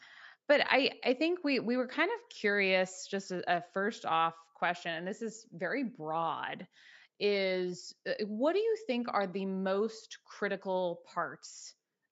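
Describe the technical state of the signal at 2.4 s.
At 2.4 s the speech signal is intact, with no dropout, clipping, distortion or other fault to be heard.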